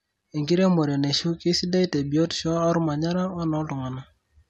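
No technical faults can be heard in this speech recording.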